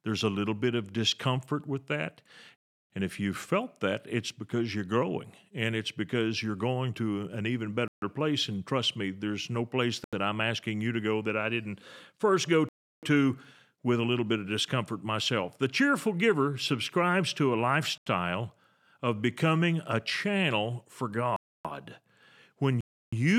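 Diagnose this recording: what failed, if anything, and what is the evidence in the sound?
The speech drops into blocks of digital silence at 2.56, 7.88, 10.04, 12.69, 17.98, 21.36 and 22.81 s, lasting 85 to 341 ms, each cutting out and back in with no fade. That's the driver or buffer stage missing its deadline; the 341 and 85 ms holes fit whole 16384- and 4096-sample buffers at 48 kHz.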